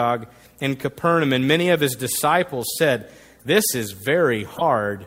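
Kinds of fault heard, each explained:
Corrupt frame muted: At 0.59 s the speech drops abruptly into a brief hole of silence, with timing intact. Bit errors in the compressed stream made the decoder reject what sounds like a few frames, and the player filled the gap with silence.
Corrupt frame decoded: Two short bursts of wrong-sounding energy. One is faint, near about -40 dBFS, at 3.38–3.44 s just after "of his disciples said". The other is loud, about -10 dBFS, at 4.54–4.62 s. Damaged frames were decoded anyway, misplacing energy in frequency.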